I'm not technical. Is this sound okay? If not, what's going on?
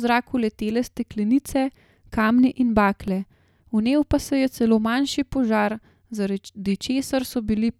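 No. At 3.08 s there is an underrun with held sample. The playback briefly ran out of audio, about 1.45 ms, and held its last level instead. A tiny bit of speech went missing.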